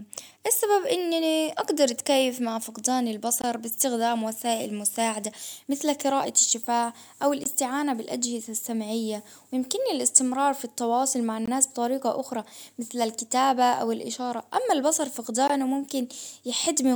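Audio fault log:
3.42–3.44, 7.44–7.46, 11.46–11.48 and 15.48–15.50 s, gap between chunks: the stream is joined in 4-second chunks with 20 ms of silence at each join, so the speech stops abruptly and resumes intact, heard as hard-edged holes every 4 seconds, the first just after "أقدر أتكيف مع فقدان".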